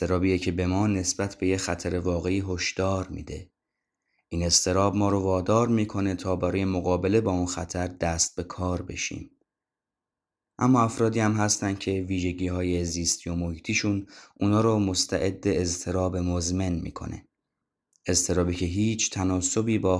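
No technical faults can be heard in this speech recording. There is nothing to place on a timeline, as no dropouts, glitches or other disturbances occur at any point.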